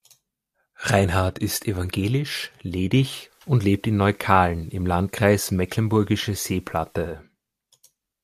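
From 3.19 to 7.24 s, digital radio blending to analogue: the receiver cross-fades over about a quarter second to FM, bringing faint hiss without any level jump, unlike a dropout's gap.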